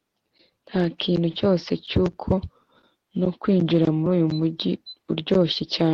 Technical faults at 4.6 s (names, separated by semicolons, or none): none